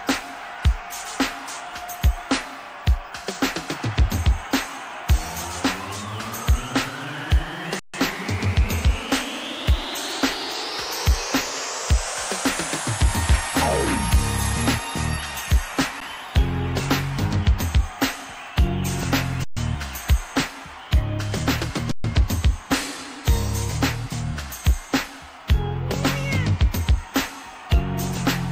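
The sound freezes flat four times, at 7.79 to 7.94 s (about 142 ms), at 16.00 s (11 ms), at 19.44 to 19.57 s and at 21.91 to 22.04 s (128 ms each), with a soft resumption each time. This is an underrun with held sample: the output buffer emptied, the converter held its last value, and playback continued where it stopped.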